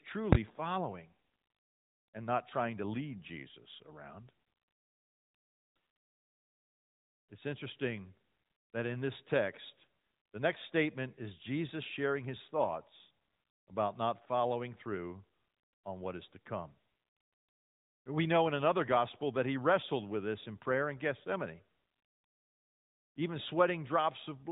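At 0.33 s a calculation produced invalid numbers at full scale, pinning the output to its limit for about 23 ms, which fits a 1024-sample block, heard as a single loud bang.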